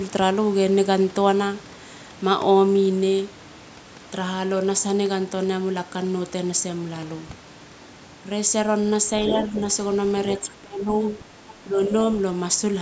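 From 9.24 to 9.59 s a second voice, the other side's voice leaking through, sits only a little below the speech; this is likely an echo canceller leaving loudspeaker sound in the microphone. Unlike crosstalk, it is a separate voice layered over the talker's. At 10.61 to 10.9 s, speech suppressed in double talk makes the talker drop sharply, by roughly 20 dB, likely as both sides overlap. Unlike a dropout, the voice dips rather than vanishing into silence. Faint leakage returns at 11.48 to 11.54 s, a milder dip follows at 11.65 to 11.77 s, and another faint scrap of leakage comes at 11.8 to 11.88 s.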